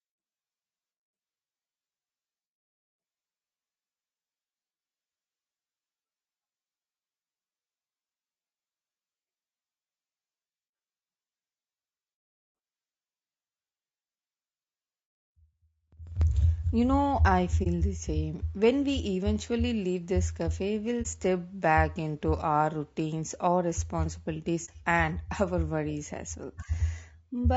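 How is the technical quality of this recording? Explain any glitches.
The technical quality is compromised: the speech carries coding damage throughout, and there are three short dropouts in the second half.

Low-delay AAC compression: For the whole clip the voice sounds rough and grainy, with a noisy haze between the harmonics and a thin, somewhat artificial top end. This is likely the low-delay AAC used for video calls. Its short frames resolve pitch harmonics poorly and spend bits inefficiently. The audible strain fits a bitrate around 32 kbps, which is too little for clean speech with this codec.

AAC frame loss with muting: Dropouts occur at 17.63–17.67 s, 21.02–21.07 s and 24.65–24.70 s, each removing about 30 ms of sound. The decoder zeroed the spectrum for the missing data, and the overlapping windows fade the signal out and back in. Each gap is therefore a brief dip rather than a hard cut. 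The length matches a single lost frame.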